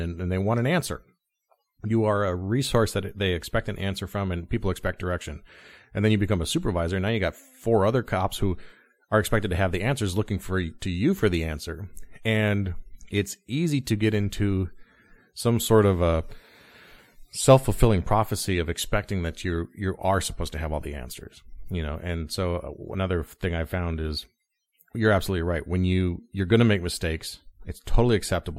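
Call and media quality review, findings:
Clock slip clicks, 0.13–28.57 s: soft rattle, ticks roughly every 40 ms. Likely unsynchronised clocks about 500 ppm apart; one sample dropped or repeated per slip.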